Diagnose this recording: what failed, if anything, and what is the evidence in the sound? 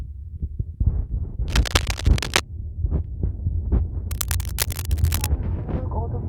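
Cable scratch noise at 1.48 to 2.41 s and again at 4.11 to 5.27 s, in the analogue wiring stage. Both stretches carry dense, irregular bursts of scratching and rustling laid over the sound, the first roughly as loud as the sound itself and the second somewhat quieter. The likely cause is a worn cable, connector or control being moved, so its contact resistance fluctuates rapidly and injects uneven noise into the signal.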